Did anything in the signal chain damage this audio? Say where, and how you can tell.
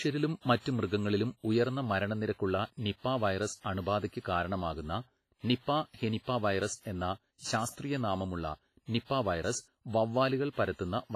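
Yes, at the codec stage, likely WMA compression applied throughout the speech. Heavy transform-coding damage leaves a washy, ringing smear around sounds and a hiss that swells with the signal, with nothing above 15.5 kHz. This fits a low bitrate near 24 kbps, where weak spectral lines are zeroed.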